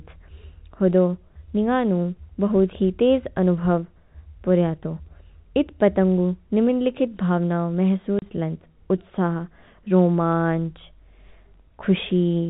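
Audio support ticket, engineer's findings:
Packet loss filled with silence, 8.19 to 8.22 s. Speech cuts out for 30 ms, hard edges. Jitter buffer or network path. One hole that size fits a single dropped packet, and the receiver just played silence in its place, no concealment. G.711 telephone coding sits underneath: nothing above 4 kHz, as expected for that path.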